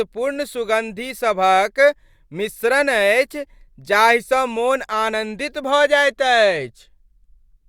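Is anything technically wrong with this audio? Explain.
No, nothing technically wrong can be heard in this speech recording.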